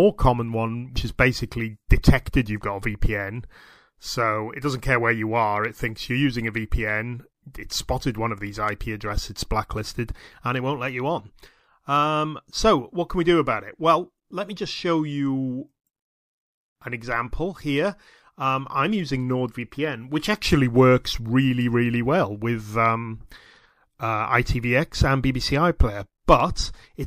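Damaged data in a compressed stream corrupts a short run of bytes near the start, so the decoder misreads those frames, loses sync and hunts for the next valid frame header. The audio breaks into a brief garbled blip from 0.93 to 0.97 s, about 40 ms long.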